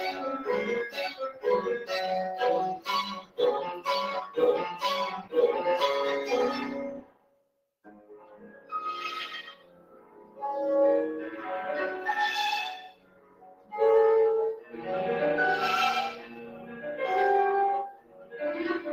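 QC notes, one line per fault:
Throughout: noise suppressor applied to non-speech sound. A suppressor tuned for speech treats steady tones, ambience and decaying tails as noise. Its gain swings by roughly 20 dB. Attacks get through while sustained parts sink, so the sound pumps and thins.
0.9–5.34 s, 6.9–11.41 s, 12.88–14.74 s, 16.22–16.78 s, 17.91–18.92 s: sound cut by the noise suppressor. Held and fading sound is pulled down and tails end early. Deepest drops are about 15 dB in the first two spans, about 14 dB in the third and last, and about 6 dB in the fourth. Sudden onsets survive.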